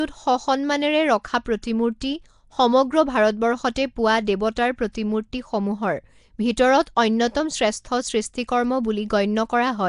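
From start to finish the speech carries a rough, hissy halo and a smeared, underwater quality, with nothing above about 10.6 kHz. This is the sound of Nellymoser compression, likely from the Flash-era Nellymoser Asao codec at a rate that fits about 44 kbps. The codec spends a fixed two bits per sample on short blocks, so weaker bands get no bits and are filled with noise, producing that plainly audible grainy wash.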